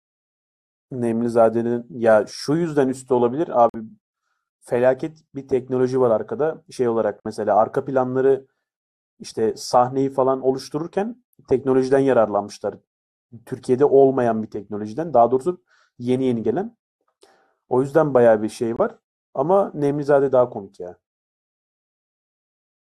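Damaged compressed frames were rejected by the decoder and replaced with silence, causing corrupt frame muted dropouts at 3.69 s, 7.20 s and 18.75 s. Each cuts abruptly into the speech, leaving holes of 64 ms, 60 ms and 46 ms, with timing preserved afterwards.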